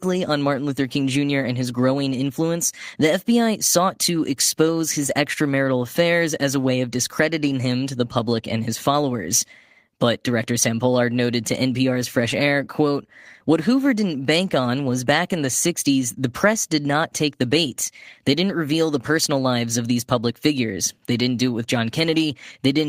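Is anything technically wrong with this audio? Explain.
No, nothing technically wrong can be heard here.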